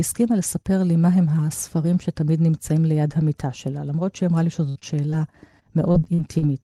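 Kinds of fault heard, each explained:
Burst of packet loss: A run of packets failed to arrive in time from 4.69 to 4.85 s. The receiver stretched the last sound across about 58 ms, fading it down as it went, so the speech turns briefly into a held buzz or a thinning hiss. About 60 ms of the original speech never plays, and when the audio picks up again it has jumped ahead past the missing piece.
Short concealed packet loss: Twice a single short stretch, about 20 ms, failed to reach the decoder on time, once at 4.79 s inside the burst and again at 5.11 s. The decoder covered each hole by continuing the preceding sound, from its pitch or as shaped noise, and then blended back into the real signal. The result is a quick smear or wobble rather than an audible gap, and a brief consonant there can disappear.
Lost packet rebuilt from error correction: At 4.82 s and again at 5.12 s, a lost packet was recovered from a low-bitrate backup copy that the following packet carried, as Opus in-band error correction does. 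Because that copy stood in for the original, no gap is heard. Each 20 ms rebuilt slice sounds rougher and noisier than the speech on either side, a short grainy patch in place of clean detail.
Repeated packet loss (robotic sound): Between 5.88 and 6.44 s, packets went missing four separate times in quick succession, the longest hole about 41 ms. Each one was patched by extending the last sound, so about a fifth of that stretch is concealment, around 120 ms, and a similar amount of real speech is lost. With patches following one another so closely, the speech turns choppy with pieces missing.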